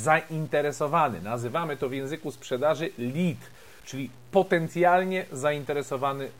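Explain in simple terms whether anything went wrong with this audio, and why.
From start to finish, the speech carries a grainy roughness that moves with the sound and is most obvious in quieter stretches. That is low bit depth without dither, likely from cutting the audio to 8 bits by plain truncation, leaving coarse steps.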